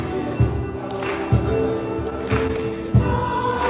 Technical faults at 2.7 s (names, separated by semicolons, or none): scattered short gaps